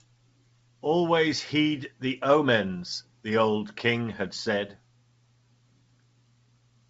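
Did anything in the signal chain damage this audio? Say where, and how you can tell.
No, nothing in this speech stood out as damaged on listening.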